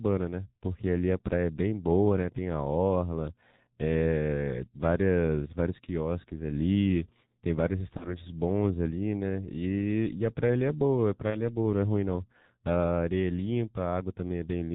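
Speech coded with the G.723.1 codec throughout, and the coding damage is heavy: nothing above 4 kHz survives, so the voice is muffled and hoarse, and consonants smear because the slow 30 ms frame updates cannot track rapid changes. The thin, rough quality fits the 6.3 kbit/s mode. VoIP packet loss concealed by the speech codec occurs at 7.97–8.13 s and 11.31–11.37 s. Each gap sounds like a single lost 30 ms frame. The decoder extends the previous pitch and filter into a brief buzzy tone or coloured noise that fades, and the level stays weak for a short while after the packets return.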